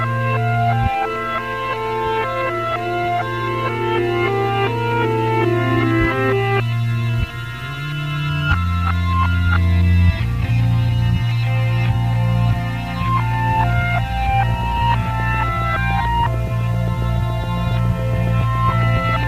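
From 14.49 s to 19.24 s, a train of clicks runs over the sound: about forty sharp, near-identical ticks at a steady 7.2 per second, peaking at roughly the level of the audio itself, so they stay obvious even in quieter moments. The likely cause is a regularly repeating pulse from nearby interference or a faulty connection or power supply. A spectrogram would show evenly spaced thin vertical broadband lines, and the waveform a row of matching narrow spikes.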